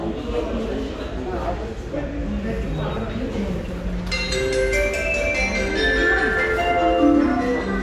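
Nothing here goes wrong, so there's no technical fault to point out anywhere in these sounds.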